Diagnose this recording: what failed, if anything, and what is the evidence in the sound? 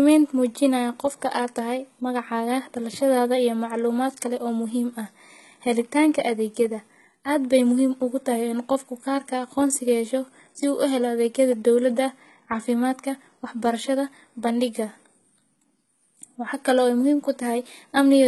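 HE-AAC compression throughout the speech, a codec-stage fault. The treble sounds bright but synthetic, s sounds turn gritty and lispy, and nothing reaches above 11.8 kHz. Likely spectral band replication rebuilding the top from copied lower bands, fitting heavy coding near 16 kbps.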